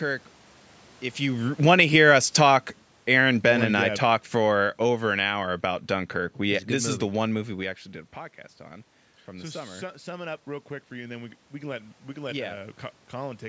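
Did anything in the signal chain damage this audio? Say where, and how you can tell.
Yes, both in the call processing stage. From 1.28 to 5.37 s there's automatic gain falling. The talker moves around 1 s, the AGC decides the input is too loud or too noisy and pulls gain down about 9 dB over four seconds. You can tell because the room background sinks right along with the voice.

The opposite happens from 8.57 to 13.44 s, just after "we actually did a". That's automatic gain rising. Around 7.5 s the talker backs off, the input drops about 15 dB, and the AGC slowly claws back about 7 dB, so voice and background noise swell together.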